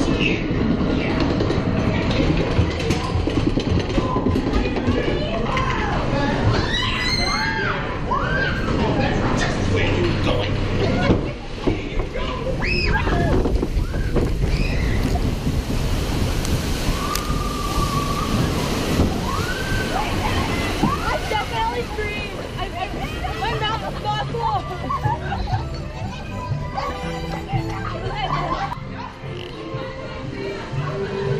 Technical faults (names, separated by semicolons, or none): corrupt frame decoded